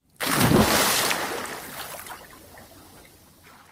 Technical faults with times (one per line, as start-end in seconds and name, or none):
1.85-3.71 call bitrate drop